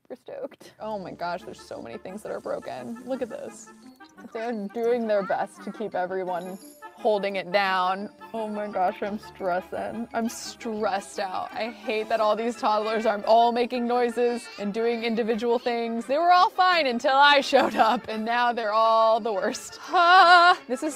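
Right near the end, from about 18.61 to 18.65 s, there's a short concealed packet loss. Roughly 20 ms of the stream didn't arrive in time, so the receiver papered over the gap by extending what it had just played, about 15 ms of synthesized fill, then crossfading back into the real audio. You hear it as a quick smear or slight wobble in the sound, gone almost before it registers.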